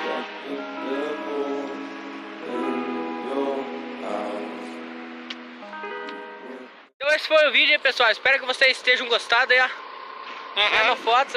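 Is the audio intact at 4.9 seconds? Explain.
Yes, the audio at 4.9 seconds is intact, with no dropout, click, distortion or other fault at that point.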